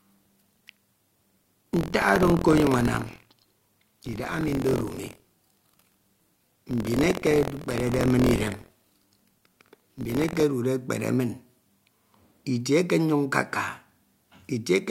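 From the start to 10.44 s the speech carries buffer tearing: the writer and the playback hardware have drifted out of step around the ring buffer, so a small slice of every period, around a tenth, replays audio from roughly 70 ms earlier. The hard joins produce a rough robotic rattle at 43.1 Hz, which fits a 1024-sample buffer, present only while sound plays. A waveform shows regular discontinuities; a spectrogram shows evenly spaced vertical streaks.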